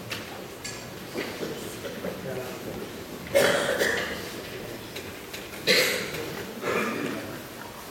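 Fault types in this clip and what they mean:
No technical faults can be heard anywhere in this audio.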